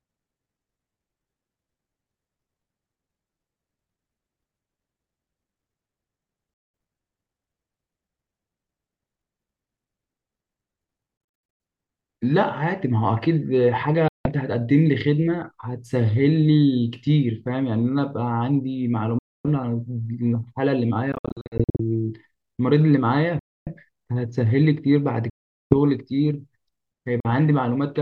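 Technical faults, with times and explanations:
6.54–6.74, 11.17–11.60, 14.08–14.29, 19.19–19.48, 21.12–21.80, 23.39–23.68, 25.30–25.74 and 27.20–27.29 s: Bluetooth dropout. The speech cuts to silence with abrupt edges and resumes further along, as though it kept playing through the gap. Most holes are single gaps of 0.17–0.41 s. At 11.17 s and 21.12 s the losses come as short, scattered gaps of up to 91 ms and 61 ms, giving a stuttering effect. The likely cause is wireless packets reaching the headphones too late and being discarded.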